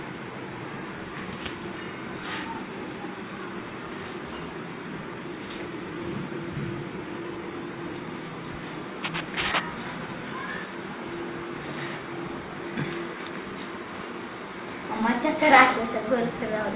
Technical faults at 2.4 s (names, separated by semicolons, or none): none